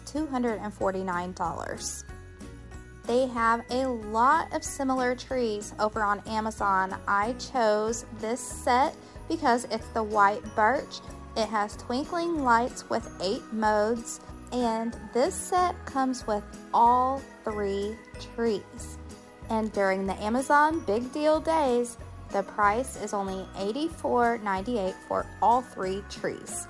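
Nothing to flag: no audible technical faults at any point in the recording.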